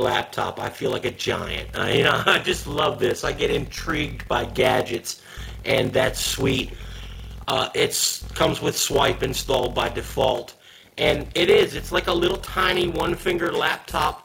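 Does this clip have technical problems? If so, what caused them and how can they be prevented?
Yes. A block size mismatch (padded) runs through the whole clip. One stage writes shorter blocks than the next stage reads, so each block ends in a short stretch of silence. Those gaps repeat at 43.1 Hz and are heard as a steady low buzz, which fits 1024-sample reads at 44.1 kHz. The gaps stretch the audio, so it plays at 0.861 times normal speed with its pitch about unchanged. To prevent it, make both stages use the same block size, or buffer between them instead of padding.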